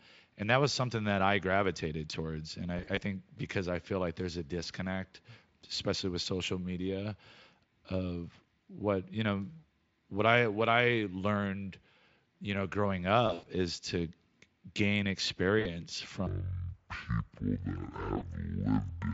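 At 2.77 s, just before "think because I feel", VoIP packet loss concealed by the speech codec blurs about 80 ms of audio scattered over 0.2 s into brief buzzy smears. It recurs at 13.27 s, between "you know growing" and "is to", with a 100 ms run that stretches into a fading tone. It recurs again at 15.59 s and at 18.17 s. Unlike a dropout, nothing falls silent. The decoder extrapolates, and the sound stays weak briefly after.

From 16.27 s to the end the section plays at the wrong speed, about 0.55 times normal. Pitch falls by about ten semitones and timing drags together, likely from playback on a mismatched clock. Concealment only colours a few frames, but this slowdown holds steadily for nearly 3 s.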